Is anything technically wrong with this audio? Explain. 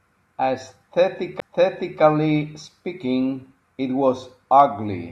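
Yes, there is a CD skip at 1.40 s in this speech. A jolt or disc flaw sent the laser to another turn of the spiral, so after a very brief mute, playback resumes from a different point. Unlike a simple dropout, the speech does not continue where it stopped.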